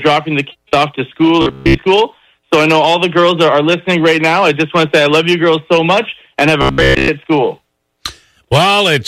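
From 1.42 to 1.84 s and 6.62 to 7.08 s, robotic sound from repeated short buffers: a rigid buzz near 66.8 Hz, likely from looping a 15 ms buffer, with no silent gaps as in dropouts.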